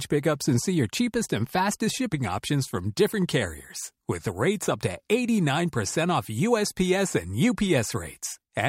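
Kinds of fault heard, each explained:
Nothing stood out as a technical fault on listening to this speech recording.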